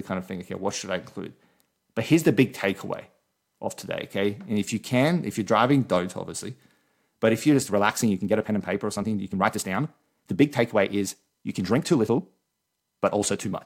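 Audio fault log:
7.46–13.65 s, time-stretched section: pace abruptly quickens 1.37 times with pitch unchanged, sounding rushed, likely from software dropping short pieces to shorten it.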